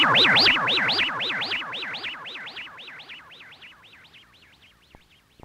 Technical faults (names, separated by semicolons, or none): wrong sample rate